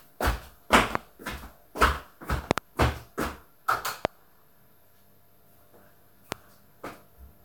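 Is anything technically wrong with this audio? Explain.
Yes. Loud pops at 0.95–0.97 s, 2.51–2.60 s (a quick double), 4.05–4.07 s and 6.32–6.34 s, likely voltage spikes from switching or static, jump about 20–25 dB above the audio, which continues underneath.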